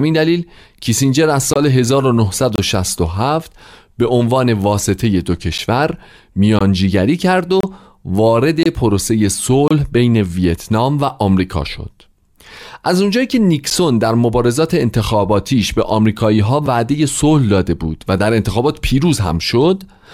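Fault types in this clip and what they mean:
gap between stream segments: Timestamps of consecutive one-second segments don't quite meet, so the player pads the difference with silence. In this speech, hard-edged holes of about 12 to 28 ms cut in between 1.53 and 13.70 s, landing roughly one second apart where they occur.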